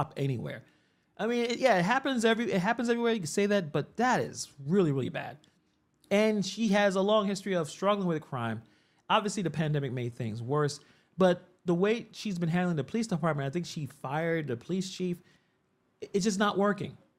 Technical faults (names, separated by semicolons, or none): none